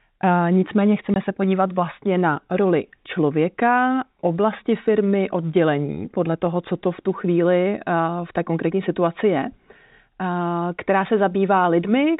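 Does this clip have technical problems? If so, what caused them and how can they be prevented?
Yes. At 1.14 to 1.16 s, just before "se podívat vlastně na", there is packet loss filled with silence. A 20 ms stretch of the speech simply vanishes, which fits a single lost packet, and the receiver played digital silence in its place instead of concealing the gap, leaving hard edges. On a waveform it shows as a flat line with abrupt cut-offs; on a spectrogram, a clean vertical blank strip. The G.711 telephone coding itself is audible only as the usual 4 kHz band limit. To prevent this, enable packet loss concealment and an adaptive jitter buffer at the receiver, and prioritise voice traffic on the network.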